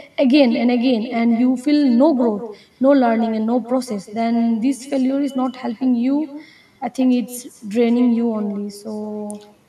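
Throughout, the far-end loudspeaker feeds its microphone with no echo canceller, so the speech returns roughly 150 ms later as a thin copy about 14 dB down.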